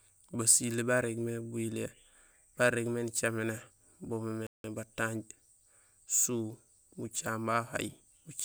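At 4.47 s the speech cuts to silence for about 176 ms, then resumes at 4.64 s. This playback stall likely came from the player running out of data.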